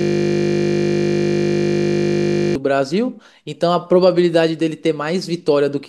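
A system hang loop is already under way when the speech clip begins: the driver froze while the hardware kept replaying one 20 ms buffer. Until 2.55 s, that fragment repeats over a hundred times, producing a steady 50 Hz buzz.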